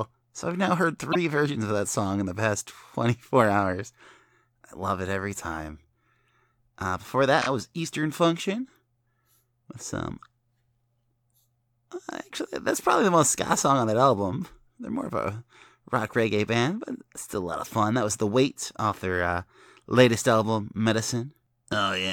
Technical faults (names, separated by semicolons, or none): repeated frames